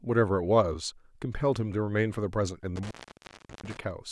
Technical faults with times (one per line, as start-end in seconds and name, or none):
2.76-3.77 intermittent contact